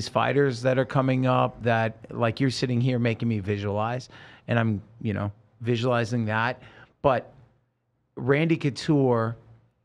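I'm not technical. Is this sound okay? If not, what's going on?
Yes, no faults heard.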